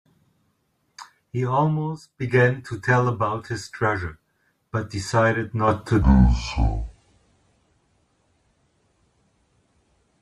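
From 6.02 s to the end, there's a section at the wrong speed: the speech suddenly drops to roughly 0.645 times its proper rate, so pitch and tempo fall together. Voices come out about seven semitones lower, dragging and heavy, and the change is abrupt rather than a gradual slide. That's most likely a playback or editing step running that part against the wrong clock, stretching it out instead of resampling correctly.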